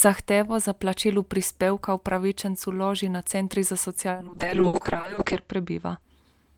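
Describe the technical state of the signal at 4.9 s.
At 4.9 s the signal is inside a call bitrate drop running from 4.14 to 6.07 s. The encoder falls from 32 to 6 kbps for about 1.2 s at its lowest, quantising coarsely and cutting bandwidth from 20 to 8 kHz, so the speech sounds muffled and rough.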